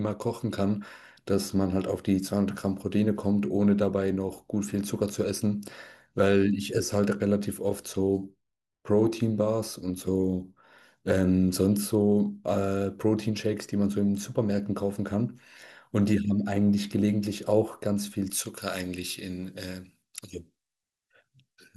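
From 18.30 s to the end at 21.77 s, the speech turns thin, bright and hissy on sibilants, with the top end about 11 dB louder at 10 kHz than at 1 kHz. This is pre-emphasis left on: a J.17 treble boost was applied without its matching de-emphasis cut.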